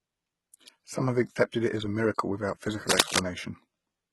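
From start to finish the speech carries heavy HE-AAC compression damage, likely from a very low bitrate near 16 kbps. The treble is rebuilt by copying lower bands upward, so sibilants sound gritty and metallic, and a spectrogram shows smeared, repeated-looking upper bands that do not line up with the harmonics below.

From 2.89 to 3.19 s a burst of cable scratch noise rides over the speech, somewhat louder than it, likely from a worn connector shifting its contact. It sounds like rough rustling, appearing as dense, jagged spikes on the waveform and broadband streaks on a spectrogram.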